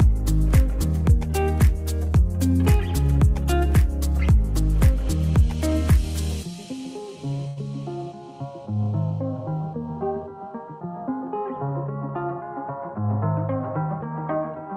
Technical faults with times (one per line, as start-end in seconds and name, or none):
7.47-7.59 short stall from a late packet